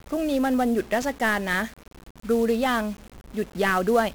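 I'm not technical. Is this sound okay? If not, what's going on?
No, it has two problems. The whole clip is speech squeezed through 1-bit DFPWM compression, a very crude format that saves just one tiny up-or-down nudge per moment of sound. That throws away so much detail that everything comes out fuzzy and crackly, with a layer of hiss over the top that buries the crisp, high parts of the voice. The damage here is heavy and lasts from start to finish.

There are also three brief underruns with held sample, at about 1.02 s, 1.99 s and 3.17 s. Each time, the playback system ran out of audio and simply held its last level, so the sound freezes flat for a split second, roughly 4, 7 and 10 ms. A little real audio went missing each time, so when sound comes back it jumps ahead.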